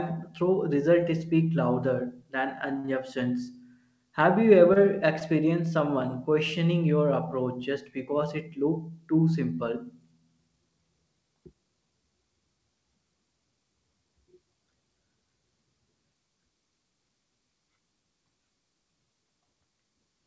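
At 2.80 s and again at 2.86 s, two short stalls from late packets run back to back until 2.90 s. The jitter buffer ran dry and the receiver held the last sound for about 37 ms and then 22 ms before resuming where it left off. Nothing is dropped. The sound is drawn out, with a slight buzz or dip.

At 4.73 s, a short concealed packet loss fills 20 ms of genuinely missing audio with continued sound. Unlike the stalls, content is lost here, leaving a brief smear or wobble, all within the G.722 band that stops at 8 kHz.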